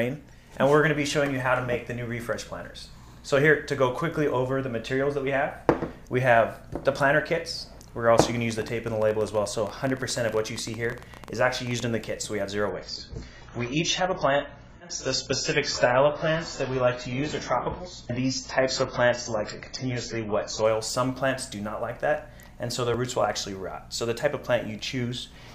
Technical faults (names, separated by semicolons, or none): dropped buffer (overrun); train of clicks; adaptive stream at a lower bitrate